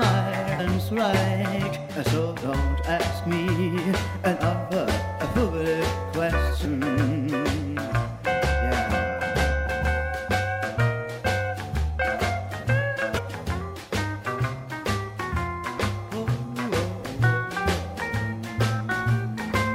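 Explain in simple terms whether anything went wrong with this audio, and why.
Three brief chirps or blips cut into the sound: one at 0.58 s, one from 6.64 to 6.67 s, and one from 13.17 to 13.19 s. This is damaged data in a compressed stream. Some bytes were corrupted, so the decoder misread those frames and lost its place until it found the next intact one.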